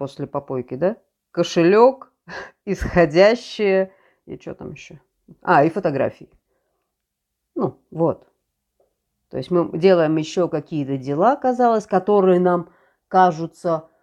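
No technical faults can be heard anywhere in the speech recording. There are no events to place in time order.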